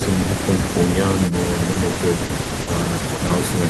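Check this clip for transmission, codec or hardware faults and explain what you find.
Two transmission faults appear, both from packets lost on the way to the decoder.

From 1.73 to 2.69 s there is repeated packet loss (robotic sound). Six gaps, the longest 60 ms, were concealed by extending the preceding signal, 180 ms in total, about 19% of that stretch. The speech turns choppy, with fragments missing.

Short concealed packet loss occurs twice, at 3.15 to 3.19 s and 3.27 to 3.31 s. Each time about 20 ms was missing and filled by continuing the previous sound before blending back into the real audio. Each is heard as a brief smear or wobble in the speech.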